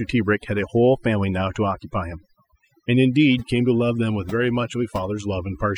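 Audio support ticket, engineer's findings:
Overdone noise removal across the whole speech clip. Background pulled to near silence with twinkling specks. Denoiser set too aggressive: bands near its noise estimate cut hard, quiet voice detail dropped alongside.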